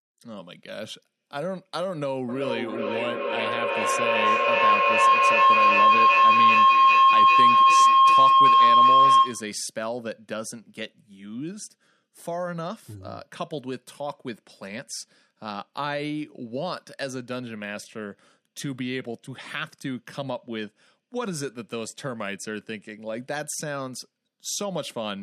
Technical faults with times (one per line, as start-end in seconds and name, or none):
2.29-9.64 feedback howl